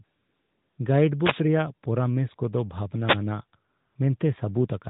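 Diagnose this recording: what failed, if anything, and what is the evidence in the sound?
Two separate things went wrong. The first is at the call-processing stage: AMR comfort noise. From 0.04 to 0.78 s, and again from 3.70 to 3.96 s, the real background drops out and a smooth, steady hiss takes its place, switching in and out abruptly. The phone decided nobody was talking, stopped sending speech frames for about 740 ms and then 260 ms, and the far end filled each gap with synthetic noise built from a rough level-and-spectrum sketch.

The second is upstream in the analogue radio link: wireless microphone noise hits. There's a short swish of static from 1.19 to 1.45 s and another from 3.05 to 3.19 s. That's the FM mic's signal fading as reflections cancel at the receiver, so the receiver's own noise floor surges up over the sound for a moment. The light, band-limited AMR narrowband coding carried through the call points to the 12.2 kbps mode.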